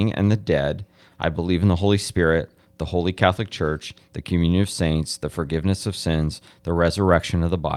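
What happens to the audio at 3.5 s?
Nothing goes wrong at 3.5 s; the speech carries on intact through that moment.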